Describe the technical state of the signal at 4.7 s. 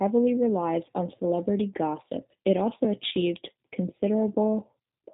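At 4.7 s the speech is still passing through the G.729 codec that affects the whole clip. It is rebuilt from a vocal tract filter, a pitch predictor and sparse pulses, which fits an 8 kbit/s G.729A link. Everything above 3.8 kHz is gone, leaving a muffled, plainly rough, synthetic-sounding voice.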